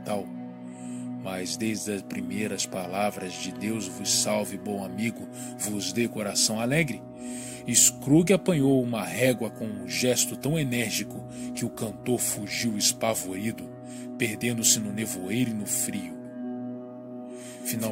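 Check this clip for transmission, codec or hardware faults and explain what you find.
A doubled audio track appears from 16.25 s and runs to the end, likely because a second, slower capture path or an out-of-step edit mixes in another copy. The audio gains a dry, full-band duplicate trailing around 150 ms behind, roughly 5 dB quieter, starting abruptly.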